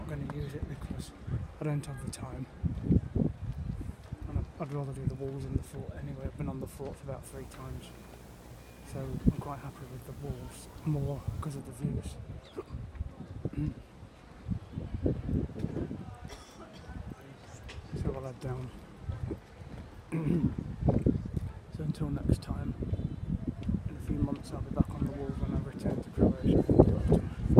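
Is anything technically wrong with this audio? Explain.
Yes. From 7.24 to 11.6 s there is video or display buzz. A screen or video cable is coupling into the audio path. It gives a 60 Hz buzz at the picture's field rate, with hash above it. It sits roughly 20 dB below the sound.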